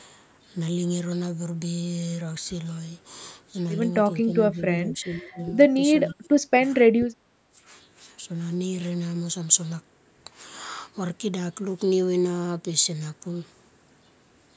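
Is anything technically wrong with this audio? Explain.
Yes. Three times the speech dips, at 4.91 to 5.40 s, 6.12 to 6.59 s and 7.32 to 7.61 s, which is likely speech suppressed in double talk: the echo canceller, unable to separate the near talker from loudspeaker echo, attenuated both. The voice dips by about 20, 30 and 15 dB.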